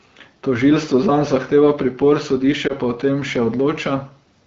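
At 2.67 to 2.73 s there is a lost AMR speech frame. One 20 ms frame failed its checksum, and the decoder reused the previous pitch and vocal-tract settings at reduced gain, producing a brief dip or warble before the speech recovers. The surrounding AMR wideband (HD Voice) coding sounds clear, which fits a rate of about 12.65 kbit/s.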